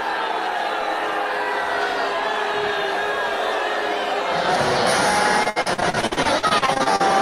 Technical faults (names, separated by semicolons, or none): repeated packet loss (robotic sound)